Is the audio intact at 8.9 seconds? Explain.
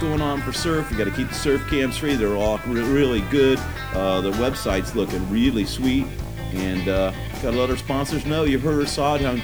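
No, low bit depth without dither is present at 8.9 s, as it is throughout. The audio was likely truncated to about 7 bits with no dither, so the rounding error tracks the signal, leaving grainy, signal-dependent distortion roughly 30 dB below it that turns quiet passages gritty.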